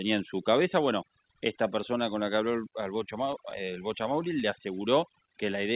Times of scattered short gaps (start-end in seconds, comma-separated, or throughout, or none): 3.04-3.80